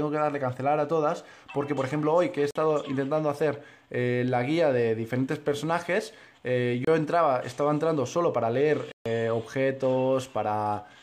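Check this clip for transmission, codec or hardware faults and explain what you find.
There are three blocks of digital silence, at 2.51–2.55 s (46 ms, which fits a 2048-sample buffer), 6.85–6.87 s (27 ms) and 8.92–9.06 s (139 ms). Each time, the signal drops straight to silence and back. Unlike a faded dropout or concealed packet loss, each block leaves a dead hole.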